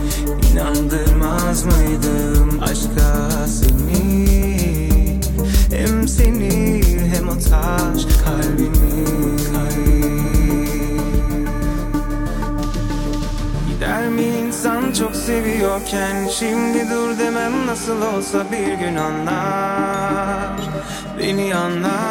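Sample values wrapped past the integer limit instead of clamping, an integer overflow that flips peaks to the opposite sign, causing sharp cracks at 3.65–3.69 s, 6.25 s, 6.83–6.85 s and 8.15 s.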